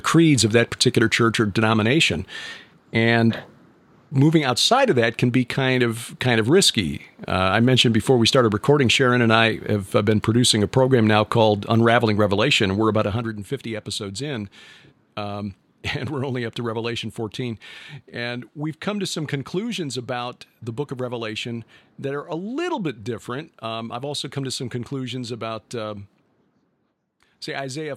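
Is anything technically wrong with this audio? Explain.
Yes, there's zipper noise in this speech between about 12.99 and 13.35 s. The level drops by roughly 10 dB there, but instead of gliding down it moves in 2 dB jumps, around twenty a second, with no smoothing between them. Each jump is a tiny discontinuity in the waveform, so you hear a quick ticking or zipping riding on the speech while the level falls.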